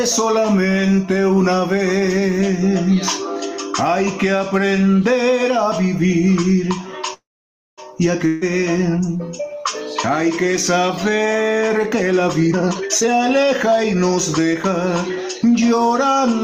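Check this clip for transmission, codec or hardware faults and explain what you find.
Four faults are audible: constant gain pumping, a call audio freeze, a burst of packet loss and a jitter buffer speed-up.

Gain pumping runs throughout. Excessive input gain, likely tamed by a fast limiter, makes the background swell in pauses and duck by about 10 dB under loud sounds.

Call audio freeze, 7.13 to 7.80 s. Delayed packets likely emptied the jitter buffer. The last sound fades into roughly half a second of silence, then resumes where it stopped, nothing lost.

Burst of packet loss, 8.28 to 8.43 s. About 140 ms of packets never arrived in time. The receiver stretched and faded the last sound, then jumped ahead past the gap.

Jitter buffer speed-up, 12.47 to 14.68 s. An overfull buffer was drained by cutting short pitch-period pieces. The audio runs at about 128% speed with unchanged pitch, shedding roughly 0.7 s.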